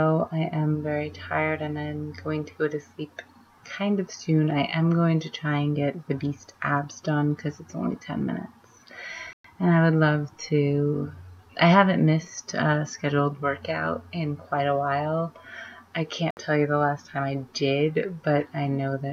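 At 9.33 s the audio drops abruptly to silence for about 113 ms, resuming at 9.45 s, and at 16.31 s a shorter gap of about 65 ms follows, ending at 16.37 s. Each time the sound simply halts and then continues. These gaps are likely a Bluetooth stall: radio interference delays packets, the headphones' buffer empties, and playback pauses until the resent data arrives.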